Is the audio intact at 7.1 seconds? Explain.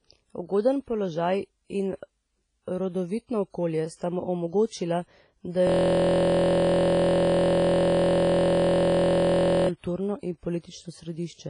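No. A system hang loop runs from 5.67 to 9.69 s, after "sta mu omogočila da" and before "kulturno in". A frozen driver left the hardware replaying one 23.22 ms slice, which fits a 1024-sample buffer, so 7.1 s is a steady 43.1 Hz buzz. The clip also shows low-bitrate audio saved at a high bitrate: nothing is heard above 10.6 kHz, likely from a low-bitrate WMA file re-encoded as high-bitrate MP3.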